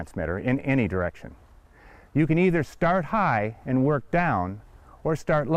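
No technical faults can be heard in this audio. Nothing at any point stands out as a problem.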